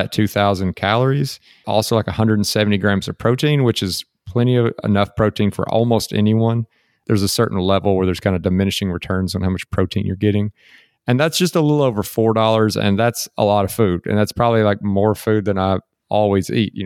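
No technical faults can be heard anywhere in the recording. Nothing in the signal chain calls for comment.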